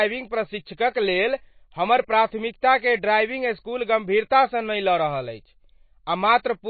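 MP3 compression damage runs throughout this speech recording: nothing sounds above 4.5 kHz, and watery, swirling artefacts are plainly audible, likely from an encoder starved at roughly 24 kbps.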